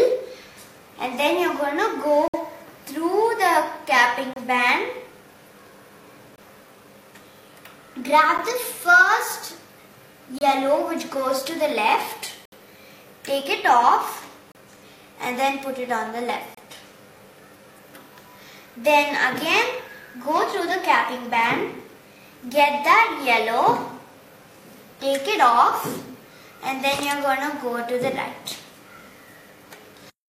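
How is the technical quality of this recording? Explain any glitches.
The recording has one recurring fault, a gap between stream segments. Short hard-edged silences fall at 2.28–2.34, 4.33–4.36, 6.36–6.38, 8.38, 10.39–10.41, 12.45–12.52, 14.52–14.55 and 16.55–16.57 s. They run from about 11 to 68 ms and arrive roughly every 2 s, which fits 2-second segments whose timestamps leave a small hole that the player fills with silence. Unlike packet loss, the sound resumes exactly where it stopped, with nothing missing, only delayed.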